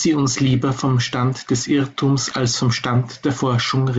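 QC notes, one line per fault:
0.50–0.56 s and 2.31–2.36 s, bit errors on an ADPCM link: two short rough bursts with pops and quick level jumps. Flipped bits knock the decoder's step size and predictor off track, so each hit rings on briefly before settling back into clean-sounding G.722.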